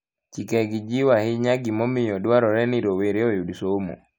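No technical faults can be heard anywhere in the speech.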